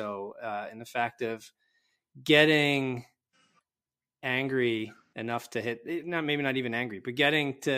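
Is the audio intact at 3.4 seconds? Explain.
Yes, at 3.4 seconds the speech plays through cleanly, with no dropout, click, distortion or other fault at that moment.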